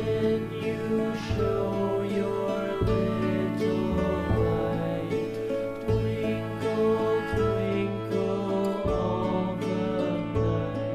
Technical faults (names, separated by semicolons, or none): low bit depth without dither